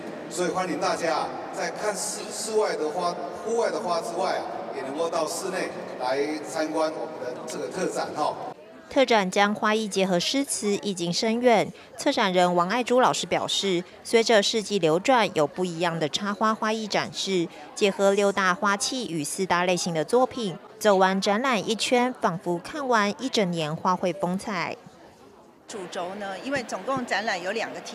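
GSM signalling bursts break into the audio from 14.22 to 14.95 s. They sound like a galloping pattern of ticks and short buzzes at about 217 Hz, roughly 25 dB below the main sound. A nearby 2G phone was signalling, and the audio circuit rectified its radio bursts.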